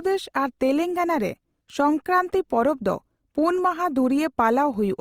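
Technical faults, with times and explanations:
Throughout: Opus compression. The speech sounds grainy and rough, with a noisy texture instead of a swirling, hollow quality. That points to likely Opus encoding in its music (CELT) mode at a low rate, around 24 kbps: the encoder preserves each band's overall energy but, short of bits, fills band detail with folded copies of lower bands or with noise. Bandwidth stays full, reaching about 20.3 kHz, so the damage is texture rather than muffling.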